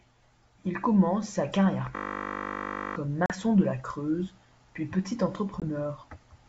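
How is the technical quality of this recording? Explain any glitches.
The recording has two kinds of glitch: a one-second hang loop and two short dropouts from ADPCM packet loss. The wideband G.722 telephone coding underneath carries the speech cleanly up to about 7 kHz.

From 1.96 to 2.96 s there is a system hang loop. The playback system froze while the sound hardware kept replaying the same 20 ms stretch of its ring buffer, about fifty times over, so roughly a second of real speech never arrives. At a 50 Hz repeat rate this sounds like a steady buzz rather than a stutter. On a spectrogram it appears as a block of evenly spaced horizontal harmonic lines at multiples of 50 Hz. The waveform shows one identical short shape tiled end to end.

At 3.26 to 3.32 s there is packet loss on an ADPCM call. A 40 ms hole, consistent with about two lost packets, was filled with silence. A single 20 ms dropout of the same kind follows at 5.6 s. 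Each gap has sharp edges, and the waveform falls straight to silence. Because the decoder's adaptive predictor and step size lose sync with the sender during the gap, the speech resumes slightly distorted. This settles over some tens of milliseconds.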